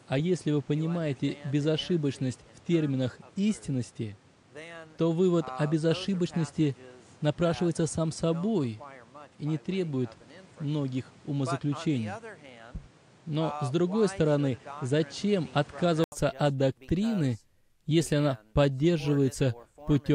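From the start until 16.12 s the audio has nothing above 10.5 kHz, with a noise bed roughly 30 dB under the signal. This sounds duller and boxed-in. At 16.12 s there is an 80 ms silence, then fuller, clearer sound with no change in loudness. This is likely an input switched to a poorer device and then back. A spectrogram would show a flat ceiling at 10.5 kHz and a raised noise floor ending in a brief gap, and the waveform would show a short flat line there.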